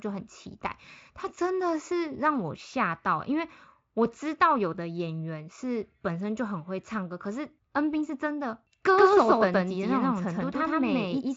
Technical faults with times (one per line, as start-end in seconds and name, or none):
8.98-11.36 doubled audio track